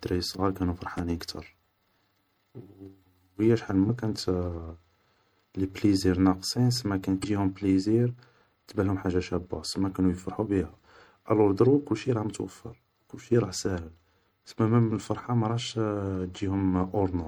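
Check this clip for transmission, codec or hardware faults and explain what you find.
The clip has three kinds of fault: a compressed stream throughout, one pop near the start and three short corruptions in the data.

MP3 compression, likely at a low rate, roughly fitting 64 kbps, runs through all the speech. The encoder had too few bits, so it cut the top band and dropped quiet frequency lines that switch on and off between frames. This leaves plainly watery, swirling sibilants and softened consonant onsets.

A loud pop at 0.98 to 1.02 s: likely a sudden voltage step, from a plug, switch or static discharge, was added to the signal and shaped by the circuitry after it. It is heard as a single sharp pop rising a few decibels above the speech, which continues underneath.

Damaged data in a compressed stream at 3.86 to 3.90 s, 7.20 to 7.24 s and 11.64 to 11.67 s: bytes in the stream were corrupted, so the decoder lost frame sync and hunted for the next header. 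Each produces a brief chirp or blip.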